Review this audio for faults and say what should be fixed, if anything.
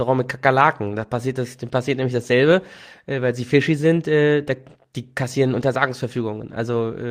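Nothing here needs fixing; I listened all the way and didn't hear any faults in the recording.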